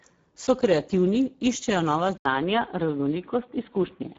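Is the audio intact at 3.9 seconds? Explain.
No. The Speex codec runs through the whole clip: its CELP coder has too few bits for the excitation, so the sound is hoarse and noisy, which fits a rate near 10 kbps. Nothing lies above 7.7 kHz, and the upper band is only noise-like fill. This is codec roughness, not simple band-limiting.

From 2.17 s to the end, just after "kreativni iščejo nova", the sound likely switches to a poorer input device. An 80 ms silence marks the switch, then the band stops at 3.8 kHz and it turns dull and boxy, with faint new background noise. The loudness stays about the same, so this is a change of device rather than a gain change.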